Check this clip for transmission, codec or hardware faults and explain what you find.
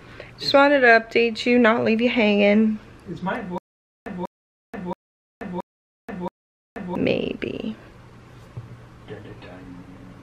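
There's one clear fault, a stutter with silent gaps, running from about 3.58 s to 6.95 s. A short burst of about 194 ms plays, then about 481 ms of dead digital silence, and the same burst comes back five times on an even 675 ms cycle. That pattern most likely comes from the player or stream stalling and replaying its last buffered fragment on each retry before running dry, so whatever belonged in that stretch is simply gone.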